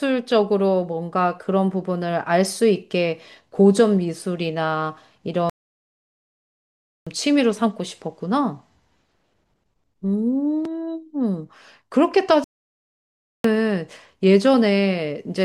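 At 5.50 s the speech cuts to silence for about 1.57 s before resuming at 7.07 s, and again at 12.44 s for about 1.00 s until 13.44 s. Each playback stall likely came from the player running out of data or being blocked.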